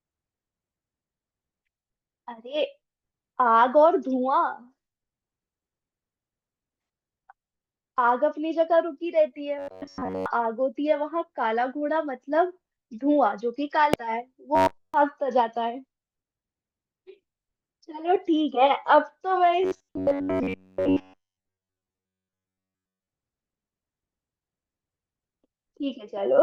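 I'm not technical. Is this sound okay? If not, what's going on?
No. From 9.59 to 10.26 s, 14.55 to 14.94 s and 19.63 to 23.08 s the speech turns into a stiff, metallic buzz, a robotic sound from repeated short buffers. New audio likely arrived too late, so a tiny slice of about 11 ms was replayed over and over, forcing a steady hum near 94 Hz. The first stretch is partly affected and the later two entirely.

At 13.94 s there is a brief chirp or blip. This is damaged data in a compressed stream: a small piece of the file was corrupted, so the player misread it and briefly lost its place.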